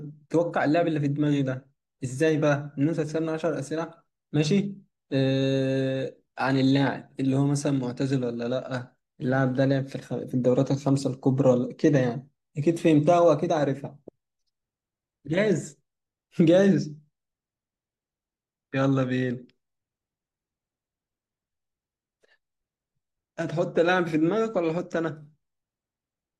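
A speech recording with no audible technical faults anywhere in it.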